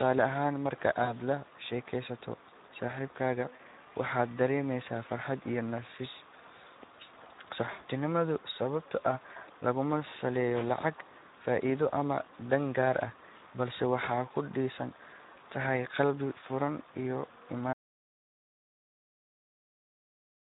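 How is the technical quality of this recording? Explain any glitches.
The recording has clearly audible damage: low-bitrate speech coding throughout, three brief concealed packet losses, and a final stretch of dead silence.

Across the whole clip, the Speex codec damage is plain. The speech sounds hoarse, grainy and somewhat buzzy, which fits a Speex mode around 11 kbps starving the excitation of bits. On a spectrogram, harmonics look smeared and the upper band is diffuse, noise-like fill rather than crisp structure.

VoIP packet loss concealed by the speech codec occurs at 1.03 s (about 40 ms, just before "lashekesato saxibkaga waxaa"), at 3.55 s (about 40 ms, right after "lashekesato saxibkaga"), and at 7.71 s (about 80 ms). The decoder stretched its last pitch and filter, so each gap becomes a short buzzy or noisy smear that fades. The waveform shows a decaying envelope, and the spectrogram shows frozen, blurred harmonics.

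From 17.73 s to the end, the audio drops out to silence. The sound cuts off mid-flow and leaves silence, with no room tone, likely because the input link or device was lost while recording continued. The waveform is a flat line, and the spectrogram is completely blank.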